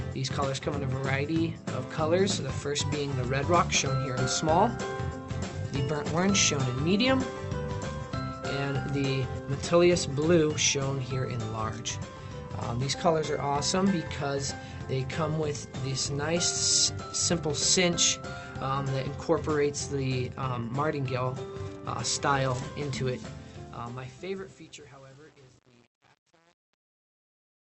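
At 5.53 s about 0.7 s of queued audio was dropped, so playback skips ahead with no gap, splicing the two sides almost directly. Right after, from 5.57 to 6.25 s, a jitter buffer speed-up trims pitch-period slices to shed its excess delay, running the sound about 13% fast at unchanged pitch. A second, gentler speed-up from 8.67 to 11.39 s runs about 6% fast and sounds slightly hurried. The fade-out starting near 23.1 s passes through a gain stage with too few bits and no dither, which fits an 8-bit stage, causing truncation distortion on a fade. From 23.13 s to the end, and worst after 23.27 s, the tail turns gritty.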